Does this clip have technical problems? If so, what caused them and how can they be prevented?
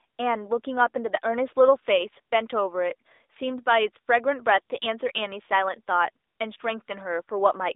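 Yes. Throughout, the speech shows AMR narrowband mobile codec damage: nothing above 3.8 kHz, a buzzy synthetic quality consistent with a mid-rate mode near 10 kbps. Prevent it by using a wideband codec or a higher bitrate.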